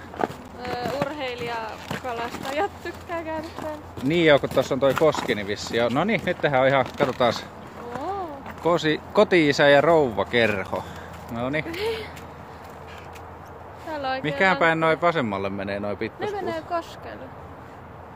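At 0.48 s and again at 10.67 s there's a block of digital silence, about 10 ms where the audio drops out. The sound cuts out and back with no fade, so each one lands as a brief tick or dip.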